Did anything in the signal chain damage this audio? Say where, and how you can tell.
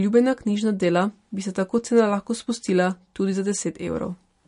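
Yes, at the codec stage, most likely MP3 compression. Across the whole speech clip nothing survives above 10.6 kHz, and weak spectral detail flickers between frames, giving a watery, swirly texture and smeared consonant attacks. That points to a starved bitrate, around 40 kbps.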